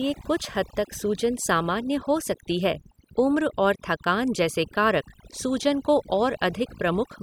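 From start to finish the speech carries overdone noise removal: a denoiser pushed too hard is cutting individual frequency bands whenever they sit near its noise estimate, taking the quieter parts of the voice along. So the gaps go almost silent with twinkly specks.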